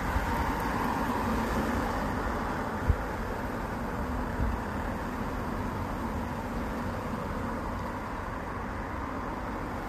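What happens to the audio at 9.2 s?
At 9.2 s the audio carries the same rough, grainy texture heard across the whole clip, with noise filling the gaps between tonal components and a dulled, synthetic top band. This is likely low-delay AAC compression at a low bitrate, around 32 kbps. Its very short frames resolve tonal detail poorly, which produces constant graininess rather than the smeared pre-echo before sharp attacks typical of standard long-frame AAC.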